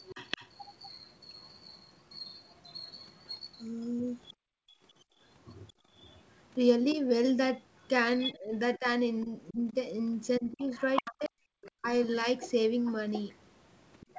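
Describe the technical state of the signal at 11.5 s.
At 11.5 s two faults overlap. The first is speech suppressed in double talk, which runs from 8.32 s to 11.83 s. The talker's level drops in bursts, at its deepest by around 40 dB, adding up to about a second of lost or thinned speech across the span. The likely cause is the echo canceller seeing both sides active at once and attenuating everything rather than only the echo. This differs from a network dropout because the gaps follow the overlap of voices, not packet timing, and the speech ducks and recovers rather than going to digital silence.

The second fault is the other side's voice leaking through, from 10.25 s to 11.84 s. A second voice is audible under the talker, only a little quieter than the talker. It likely comes from the far-end loudspeaker playback reaching the microphone with part of it left behind by the echo canceller. 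It differs from crosstalk or a second person in the room because this voice is the far side returning through the loudspeaker, not a separate talker near the microphone.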